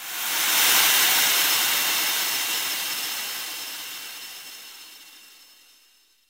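No technical faults can be heard in this recording.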